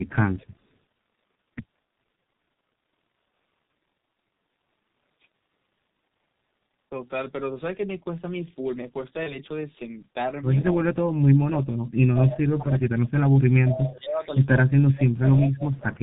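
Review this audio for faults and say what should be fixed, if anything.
Throughout the recording, the speech sounds muffled and hoarse, with nothing above 4 kHz and consonants smeared together. That dull, rough texture fits the G.723.1 codec at around 6.3 kbit/s. It codes speech in 30 ms frames with a slowly updating voice model and discards the upper band, so sibilants and fast transitions blur heavily. Prevention: negotiate a wideband codec such as G.722 or Opus instead of G.723.1.

At 0.40 to 0.46 s, 10.61 to 10.75 s, 12.16 to 12.20 s, 13.67 to 13.77 s, 14.42 to 14.64 s and 15.23 to 15.28 s, a copy of the speech trails the original by 176 ms. It is barely audible at first, and by the later passages it sits only about 10 to 15 dB below the speech. This is likely an echo leak: a loudspeaker's output reaching the far end's microphone and slipping past its echo canceller. Prevention: use a headset or improve the far end's echo cancellation.

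From 9.23 to 9.39 s, the speech briefly turns into a stretched sound that fades and stays weak before recovering. This is VoIP packet loss concealed by the speech codec, and the sound points to one missing 30 ms frame. The decoder repeated its last pitch and filter at falling gain, and because each frame builds on the previous one, the damage lasted well beyond the gap itself. Prevention: add forward error correction or a larger jitter buffer on the network path.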